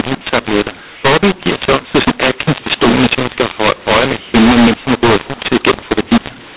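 From start to finish the speech carries a mu-law and A-law mixed up fault: the samples were encoded with G.711 A-law but decoded as mu-law. Because the two logarithmic curves assign different levels to the same 8-bit codes, loud and soft parts are rescaled inconsistently, producing a harsh, gritty distortion on every syllable. The quietest codes map well above zero, so the pauses are filled with a steady noise floor rather than silence. The underlying telephone band stays intact, with nothing above 4 kHz, which fits an 8 kHz sample rate.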